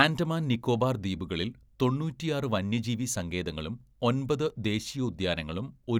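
No technical faults occur at any point in the speech, so there are none to describe in time order.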